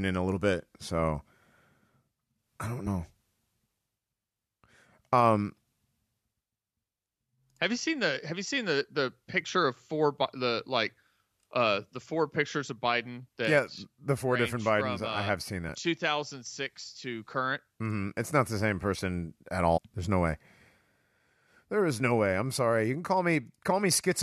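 Damaged data in a compressed stream shows up three times in this speech: at 2.86 s, from 15.68 to 15.70 s, and from 19.76 to 19.78 s. Each time, a stretch of the encoded stream is corrupted, so the decoder misreads or drops the affected frames, loses sync, and scans for the next valid frame header. Each event is a brief chirp or blip, about 20 ms long, cutting across the speech.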